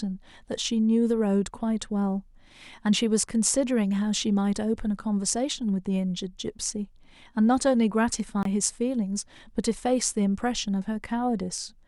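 A Bluetooth stall at 8.43 to 8.46 s cuts the speech to 23 ms of silence before it carries on. The likely cause is radio interference holding back packets, so the headphones' buffer emptied and playback paused until the resent data arrived.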